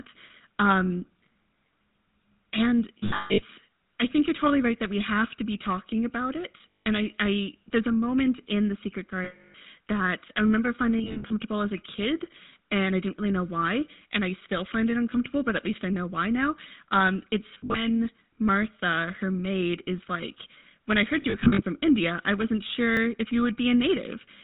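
Speech heard through the GSM full-rate codec at 13 kbps, with plainly audible damage throughout: nothing passes above 4 kHz, and the pulse-driven vocal-tract model, which keeps only every third excitation sample, gives the voice a buzzy, gravelly roughness. Lost GSM frames cause metallic, rough held sounds where the decoder repeats the last good frame. This happens at 2.99–3.44 s just before "I think you're totally" (about 360 ms lost in scattered runs), at 6.82–6.87 s between "be talking about it" and "I I there's a", and at 9.24–9.55 s (300 ms). It also happens at 10.98–11.31 s, 17.54–17.82 s, and at 21.22–21.62 s after "is like when I", each a few scattered runs of around 140–180 ms in total. A repeated buffer at 22.97 s plays one short piece twice with a hard join, heard as a click or brief buzz, which fits a 10 ms buffer replayed when new audio arrived late.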